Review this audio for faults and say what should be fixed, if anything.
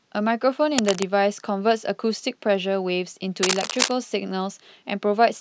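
Two bursts of cable scratch noise cross the speech, from 0.77 to 1.06 s at a little below speech level, and from 3.43 to 3.91 s at about speech level. Both sound like harsh rustling scratches, likely from a worn cable or connector shifting so its contact resistance jumps erratically. A spectrogram shows ragged broadband smears, and the waveform shows dense, irregular spiky fuzz. Replace or reseat the cable and fix it so it cannot move during recording.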